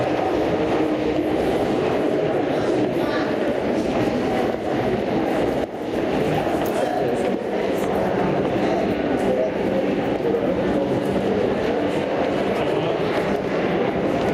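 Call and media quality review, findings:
Gain pumping throughout, level swinging around 5 dB, dipping on each loud sound and recovering after it, dynamics squashed. Likely input gain set far too high, with a fast limiter/compressor clamping each loud event. Follows every loud onset, unlike slow AGC drift.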